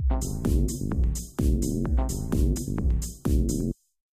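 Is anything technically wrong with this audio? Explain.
Yes. At 2.57 s and 3.61 s there are dropped buffers (overrun): the software likely failed to collect audio before the hardware overwrote it, discarding roughly 10 ms and then a few milliseconds. The surrounding audio is spliced directly together, so each point gives a small forward jump.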